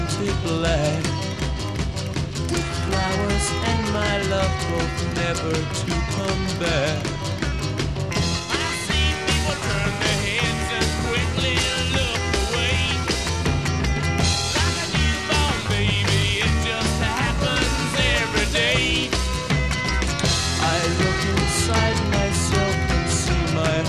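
No technical faults can be heard anywhere in the recording. The sound runs without any audible problem at any point.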